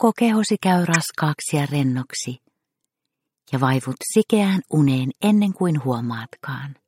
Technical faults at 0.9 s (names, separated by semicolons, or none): corrupt frame decoded